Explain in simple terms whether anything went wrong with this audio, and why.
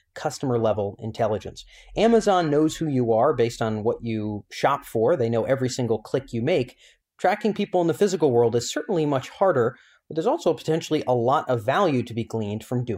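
Something did go wrong, from 1.95 to 3.15 s, right after "customer level intelligence". This is a Bluetooth SBC bit pool drop. The wireless link got crowded, so fewer bits carried the sound. The speech turns dull and gritty until "are based on what".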